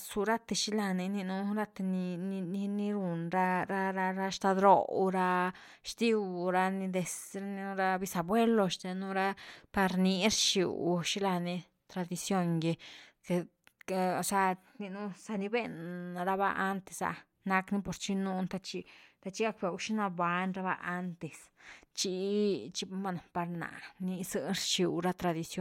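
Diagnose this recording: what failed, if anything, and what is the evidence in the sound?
Nothing in the recording chain failed; the speech signal holds steady, continuous level and timing throughout, with no audible disturbance at any point.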